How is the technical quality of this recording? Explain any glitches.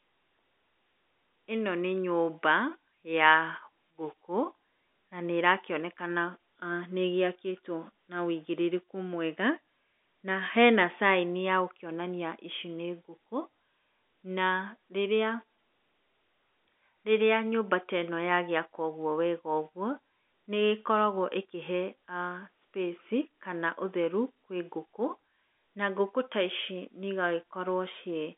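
No glitches to report; the speech sits in a normal telephone band of about 250 Hz to 3.6 kHz, consistent with G.711 A-law telephone coding at 64 kbps.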